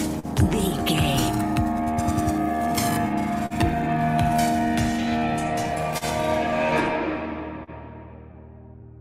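Clock drift between sender and receiver runs through the whole clip. The sender's clock is a few percent slow against the receiver's, so the jitter buffer keeps draining and small timing hiccups crop up at uneven spacing, with bits of sound stretched or repeated.

You can hear short stalls from late packets at 0.19, 3.46, 5.98 and 7.63 s, each lasting about 70 ms. Each time, the buffer ran dry and the last sound was held for roughly 40 ms until the packet turned up. Nothing drops out, but you get a brief smeared hold with a faint buzz or dip.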